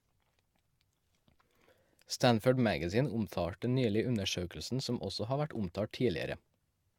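Speech with generation loss throughout. It sounds swirly, hollow and smeared, with blurred attacks. This likely comes from about five lossy re-encodes, consistent with AAC-LC at 96 kbit/s.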